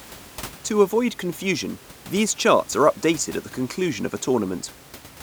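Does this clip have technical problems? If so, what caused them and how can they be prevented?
No, nothing stood out on listening to this speech clip, and the faint room noise sitting about 21 dB below the speech is simply part of the recording space.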